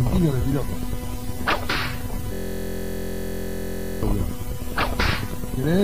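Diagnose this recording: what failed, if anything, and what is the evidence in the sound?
Something hung at the driver or buffer stage: a system hang loop from 2.34 to 4.03 s. A 23.22 ms slice repeats exactly, dozens of times, giving a steady 43.1 Hz buzz. That fits a 1024-sample ring buffer the hardware kept replaying while the system froze.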